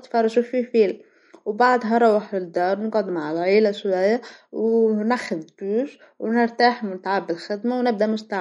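MP3 compression runs throughout the speech, with nothing above 11.1 kHz, which fits a low bitrate near 47 kbps. Short of bits, the encoder likely cut the treble and dropped weak frequency lines frame by frame, leaving a plainly watery, swirling texture.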